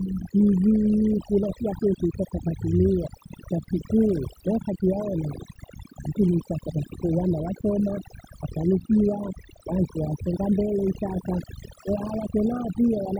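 Throughout the speech, the background sinks to near silence dotted with twinkling specks. This is overdone noise removal: a reduction setting far too strong, switching off individual frequency bands near the noise floor and taking quieter parts of the voice with them.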